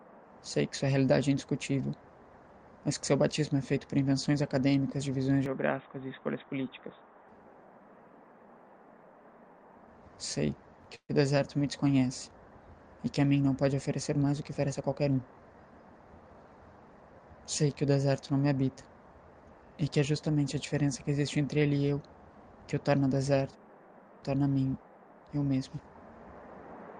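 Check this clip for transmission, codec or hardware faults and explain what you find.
Three faults can be heard: a spell of narrowed bandwidth, a brief freeze, and a short accelerated passage.

From 5.46 to 7.28 s the sound turns dull and a little quieter, with a faint new noise floor. The likely cause is an input switched to a poorer device with a narrower band. A spectrogram shows everything above 3.8 kHz cut off abruptly, with no gap at the switch.

From 10.95 to 11.11 s there is a call audio freeze. Packets were likely delayed, the jitter buffer emptied, and the receiver stretched the last sound for 136 ms, ending in about 70 ms of silence. Nothing is lost, but everything after it arrives 136 ms later. The waveform shows a decaying fill tailing into a flat line.

From 14.23 to 15.18 s a jitter buffer speed-up runs the audio at 114% speed with unchanged pitch, sounding hurried. The receiver trimmed about 150 ms in total by cutting short pitch-period pieces. 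A spectrogram shows compressed timing with no shift in frequency.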